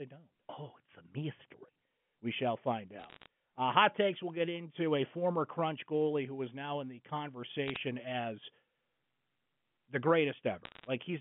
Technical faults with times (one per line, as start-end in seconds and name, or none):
3.00-3.26 bit errors on a digital phone line
7.68-7.76 bit errors on a digital phone line
10.65-10.87 bit errors on a digital phone line